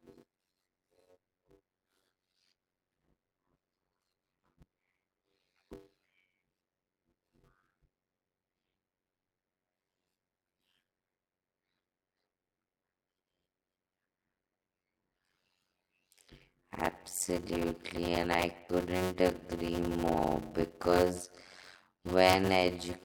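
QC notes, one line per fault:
Throughout: block size mismatch (padded). Each short block of speech is followed by a stretch of zeros before the next begins, so the audio is chopped by tiny gaps at a steady rate, heard as a buzz at about 91.9 Hz, which fits 256-sample written blocks. The speech plays at 0.533 times normal speed with its pitch roughly unchanged, which separates it from a sample-rate mismatch, where slowing also lowers the pitch.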